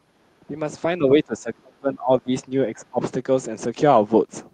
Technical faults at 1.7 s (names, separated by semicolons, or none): speech suppressed in double talk